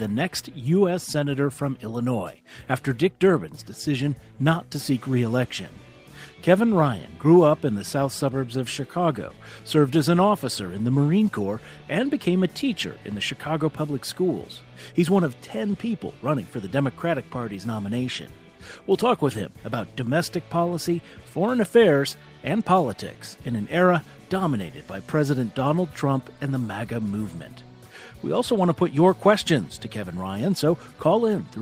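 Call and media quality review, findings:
No audible faults found in this recording.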